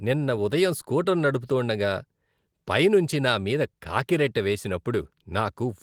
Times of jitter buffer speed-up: none

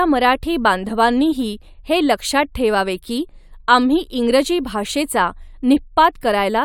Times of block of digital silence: none

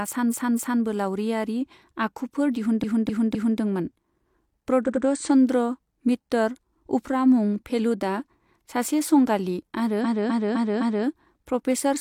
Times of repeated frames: 0.28-0.79, 2.79-3.56, 4.84-5.01, 10.01-11.03

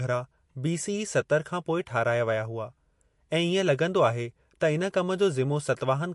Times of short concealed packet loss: none

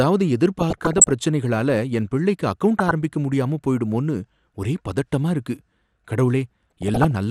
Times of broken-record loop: none

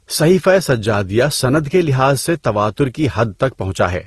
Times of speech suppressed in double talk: none

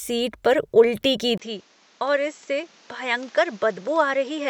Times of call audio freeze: none

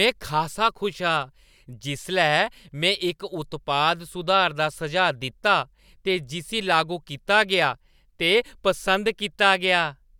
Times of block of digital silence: none

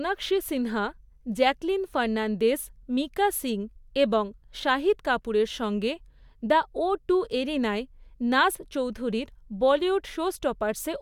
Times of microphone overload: none

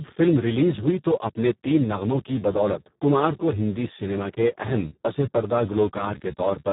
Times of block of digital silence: 2.28

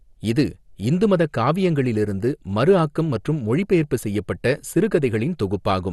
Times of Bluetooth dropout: none

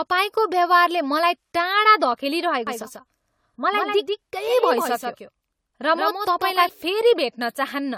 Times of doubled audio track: 2.67-6.69

